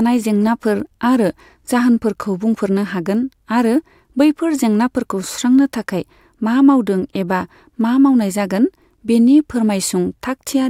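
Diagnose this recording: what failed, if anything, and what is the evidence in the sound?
Nothing failed in this recording, and the sound gives no evidence of a fault at any stage.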